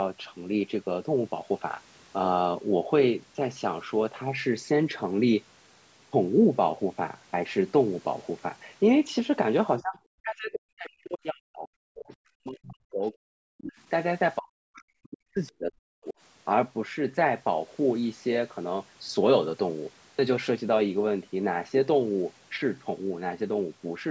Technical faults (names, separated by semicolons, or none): speech suppressed in double talk